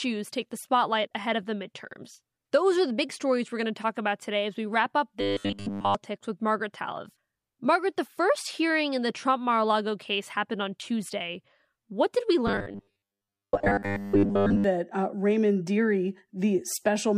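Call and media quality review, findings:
Robotic sound from repeated short buffers, 5.21–5.95 s (fully buzzed) and 12.47–14.64 s (mostly). Rigid metallic 100 Hz buzz, 10 ms period. Likely jitter-buffer underrun looping the last block. Spectrogram shows flat 100 Hz harmonic comb, and the waveform shows identical repeating cycles.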